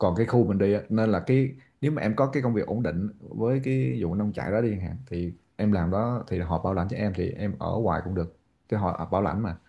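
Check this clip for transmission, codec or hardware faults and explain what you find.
Nothing faulty turns up anywhere in this speech recording.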